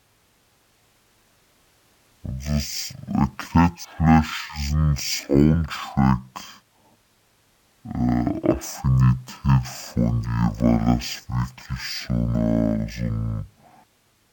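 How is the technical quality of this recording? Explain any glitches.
The quality is poor. The whole clip suffers from stereo read as mono. Left and right samples are read in turn as one channel. The speech plays at half speed and a full octave low, 12 semitones down, sounding slow and dragged.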